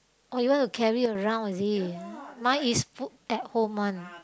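From 1.06 to 1.15 s, a sudden gain jump drops speech and background noise together by about 6 dB, likely from a digital gain step applied without a ramp.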